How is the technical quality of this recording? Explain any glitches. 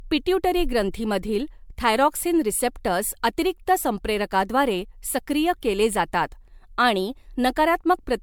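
The technical quality is degraded throughout by generation loss. Across the whole speech clip the sound is swirly, smeared and hollow, and consonant attacks blur. The likely cause is MP3 encoding repeated about seven times, fitting 128 kbit/s. Each pass requantises on a shifted frame grid, so noise and spectral holes pile up. The band still reaches 20 kHz, so the damage is texture, not dullness.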